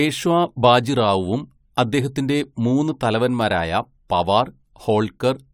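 No technical faults can be heard anywhere in the speech recording. Nothing in it calls for a timestamp or further comment.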